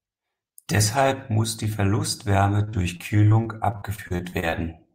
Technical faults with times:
2.63-4.54 repeated packet loss (robotic sound)

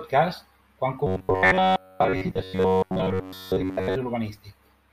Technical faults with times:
1.07-3.95 robotic sound from repeated short buffers

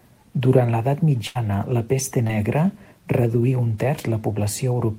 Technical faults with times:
1.27-1.37 burst of packet loss

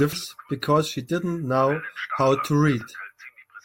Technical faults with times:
0.13 damaged data in a compressed stream
2.81 damaged data in a compressed stream

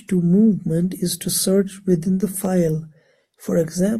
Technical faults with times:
0.99 dropped samples
2.45 dropped samples

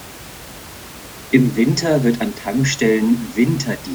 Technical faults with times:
none

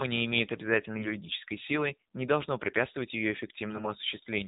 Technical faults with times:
0.00-4.48 AMR narrowband mobile codec
0.98-1.15 AMR bit errors

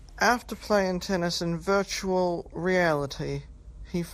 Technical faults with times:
0.00-4.13 MP2 compression

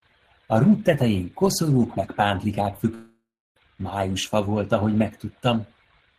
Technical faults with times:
2.94-3.57 long network dropout

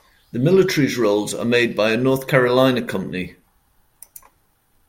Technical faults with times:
none

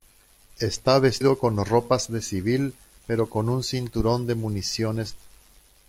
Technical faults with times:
1.16-1.22 damaged data in a compressed stream
5.07-5.13 damaged data in a compressed stream

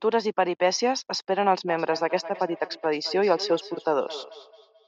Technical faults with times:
1.68-4.87 feedback echo between two devices

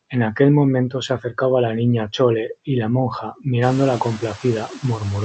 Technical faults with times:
0.00-5.24 noise suppressor artifacts
0.90-1.37 speech cut by the noise suppressor

